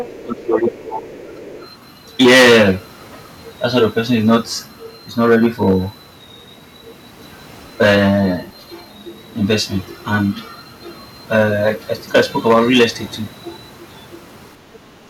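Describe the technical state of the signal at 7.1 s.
At 7.1 s the speech is hard clipped, as it is for the whole clip. The signal is driven about 14 dB past what the stage can pass. A few percent of samples hit the ceiling and are cut flat. Those flat tops add high harmonics, heard as harsh fuzz on loud syllables.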